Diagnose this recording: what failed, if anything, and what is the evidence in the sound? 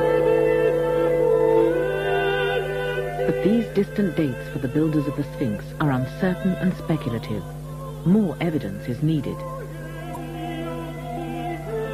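Codec stage: damaged data in the compressed stream at 10.12–10.17 s gives a brief 44 ms disruption as the decoder loses sync and searches for the next frame header.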